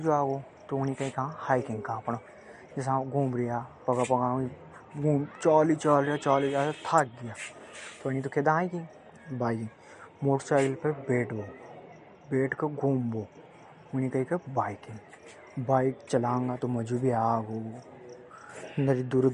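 From start to finish the speech carries plainly audible codec damage, most likely MP3 compression at a low bitrate, something like 48 kbps. Nothing comes through above 11.2 kHz, so the treble is sliced off flat. With so few bits, weak frequency lines get dropped and then return frame to frame. That gives the swirly, watery texture you hear, with metallic chirping on the s sounds and a smear on consonant attacks.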